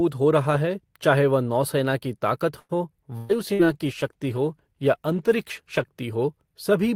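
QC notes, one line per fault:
2.59 to 2.72 s, short stall from a late packet: a packet reached the receiver late, the jitter buffer emptied, and the receiver stretched the last sound for about 99 ms until the packet arrived. Playback then resumed from the same point, so nothing is lost, but the sound hangs unnaturally long with a faint buzzy sustain, and everything after it plays roughly 99 ms later than before.
3.17 to 3.32 s and 3.54 to 3.62 s, burst of packet loss: consecutive packets went missing, about 120 ms in the first gap and 60 ms in the second. Each time the receiver extended the last sound and faded it, for about 120 ms and 54 ms respectively, before resuming further on. A sound is held as a decaying buzz or hiss, then the audio jumps ahead with that stretch gone.
3.22 to 6.01 s, call bitrate drop: the bandwidth estimate fell and the Opus encoder was cut from 48 to 18 kbps, staying at the lower rate for about 2.7 s. 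With far fewer bits the coding becomes coarse and the upper frequencies are trimmed, so this section sounds duller, rougher and watery compared with the opening, until quality returns near the end.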